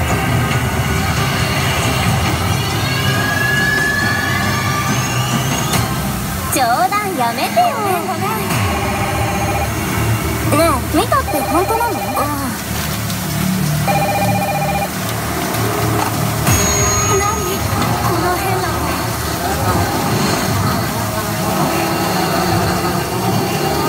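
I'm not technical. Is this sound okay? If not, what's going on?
No, there is one small problem. At 8.29 s you hear a single sharp tick. This is a bit error spike. Somewhere along the way, one tiny piece of the digital data was flipped by mistake. That made one sample jump far away from where it should be, then snap straight back. Because it lasts only an instant, it sounds like a brief click with no connection to the sound around it.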